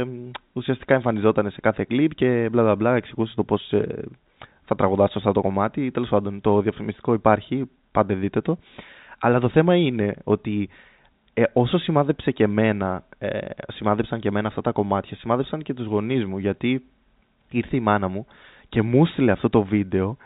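Nothing goes wrong anywhere in this speech recording, which simply carries the narrow, telephone-style sound of G.711 coding with nothing above 4 kHz.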